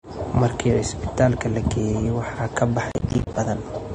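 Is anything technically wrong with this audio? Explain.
Yes, two things. Throughout, the speech sounds like transcoding between lossy codecs: nothing above 9.7 kHz, with smeared, swirly artefacts stacked together, likely an MP3 re-encoded to low-bitrate AAC. From 2.92 to 3.36 s there's processor overload crackle: the processor kept missing its deadlines for buffers of roughly 10 ms, leaving about twenty tiny silent gaps that tear gritty crackle through the speech.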